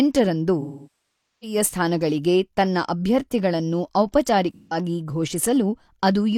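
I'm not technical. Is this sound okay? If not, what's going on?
No. This is AAC frame loss with concealment: bits of speech went missing, and the player filled the gaps from the last sound it had. From 0.60 to 1.57 s the speech smears, then fades toward silence and back. At 4.54 to 4.77 s there is a brief smeared, noisy patch. Unlike a plain dropout, it blurs and fades instead of cutting off sharply.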